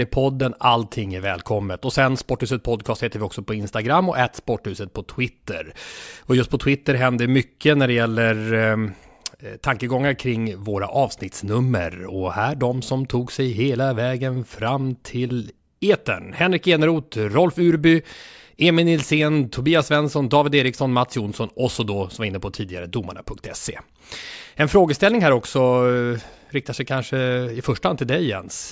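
No technical faults can be heard at any point in this speech recording. There is nothing to place on a timeline, as no moment stands out as a problem.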